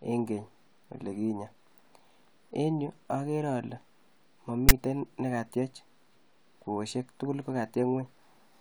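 File tags played as audio, at 4.69 s: a block of text metadata was decoded as if it were sample data, so the speech is cut by a brief, loud rasp pushed off-centre to one side, starting and stopping abruptly with hard edges.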